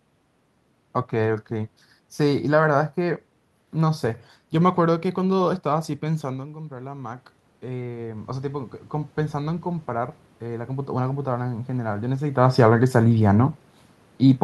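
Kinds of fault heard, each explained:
Automatic gain rising: after the talker moves away from the microphone around 6 s, voice and room noise swell together from 6.06 to 12.32 s as the automatic gain control slowly adds about 10 dB to offset an input drop of about 11 dB.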